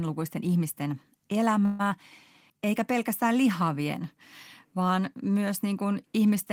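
Speech, with three network timing faults close together. At 1.65 s a call audio freeze begins. The last sound is stretched into a fading buzz or hiss for about 140 ms, to 1.81 s. Speech then resumes where it stopped, with nothing lost. Packets held up in transit, draining the jitter buffer, are the likely cause. Just after, at 1.89 s, there is a skip ahead lasting until 1.92 s. Roughly 70 ms of speech vanishes. The two sides are butted together almost directly. The stretch was dropped in transit or by an overflowing jitter buffer while later audio was already waiting. From 2.53 s to 2.97 s a jitter buffer slow-down stretches the speech. The buffer repeats single pitch periods to rebuild its reserve, adding 45 ms. Playback runs at 91% speed with unchanged pitch. Sounds drag slightly.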